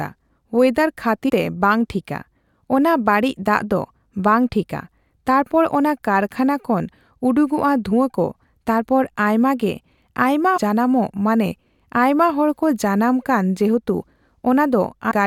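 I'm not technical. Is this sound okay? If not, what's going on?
No. The speech has damaged data in a compressed stream: bits of the stored file were corrupted, so the player stumbles, loses its place and skips ahead. You hear brief chirps or blips at 1.28–1.30 s, just before "ᱛᱮ ᱵᱟᱝ"; at 7.91 s, between "ᱚᱱᱟ ᱠᱟᱨᱠᱷᱟᱱᱟ ᱠᱷᱚᱱ ᱩᱰᱩᱠᱚᱜᱼᱟ" and "ᱠᱚ ᱛᱟᱨᱯᱚᱨ ᱟᱭᱢᱟ ᱜᱮ"; at 10.56–10.58 s, after "ᱛᱟᱨᱯᱚᱨ ᱟᱭᱢᱟ ᱜᱮ ᱟᱭᱢᱟ"; and at 15.10–15.12 s.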